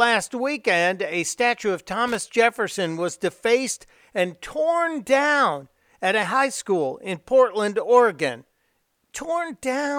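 At 2.07 to 2.15 s, just after "weekend a statue of", loose connector crackle: a worn contact breaks the signal intermittently, producing a short irregular burst of scratchy crackle.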